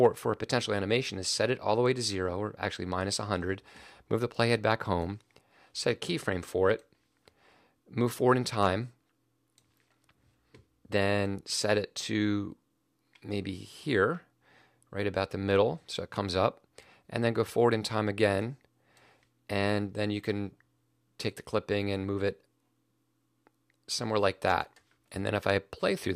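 Hard clipping occurs at 0.05 s, 8.62 to 8.67 s, 24.48 to 24.54 s and 25.49 s. Peaks overrun the available level by about 2 dB and are sliced flat, and the squared tops throw off high harmonics that sound like brief crackles on those peaks.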